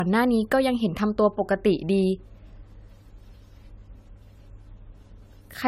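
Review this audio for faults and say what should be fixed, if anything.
Generation loss runs through the whole speech clip. The sound is swirly and hollow, and consonant attacks are smeared. Nothing is present above 19.1 kHz. The likely cause is repeated lossy encoding, around seven passes, which fits an AAC-LC chain near 96 kbit/s. Each decode and re-encode quantises on a shifted frame grid. The noise and spectral gaps pile up with every pass. Prevent it by keeping a lossless master and encoding only once, at the end.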